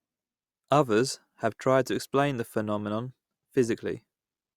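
From 0.2 s to 4.55 s, faint ticks recur at a steady interval of around 0.4 s, about ten in all. These are clock slip clicks, likely from two devices running on unsynchronised clocks that differ by roughly 50 ppm, so a single sample is dropped or repeated each time the drift reaches a whole sample. Unlike random digital clicks or dropouts, these ticks keep an even, metronome-like spacing and are only slight discontinuities, not gaps.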